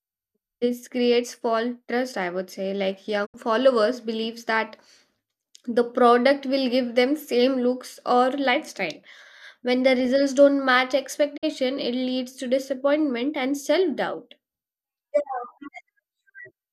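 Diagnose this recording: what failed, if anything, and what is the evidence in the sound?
A digital broadcast dropout at the reception stage: the speech quickly fades (about 20 ms) to silence at 3.25–3.36 s and 11.36–11.45 s. The receiver muted on failed frames, unlike a concealing decoder.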